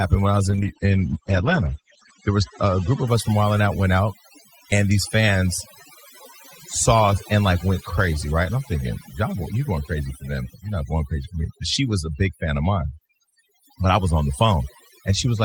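Overdone noise removal runs through the whole clip: the noise reduction is set so hard that frequency bands near its noise estimate are pushed down or shut off, taking quieter parts of the speech too. The background drops and breaks up into twinkling specks.

From 0.54 to 3.13 s, just after "when I was" and up to "us from", a call bitrate drop occurs. The bandwidth estimate fell and the encoder cut from 32 to 10 kbps, narrowing the audio band from 20 kHz to 8 kHz. For about 1.6 s at the lowest rate the speech turns rough, watery or muffled before recovering.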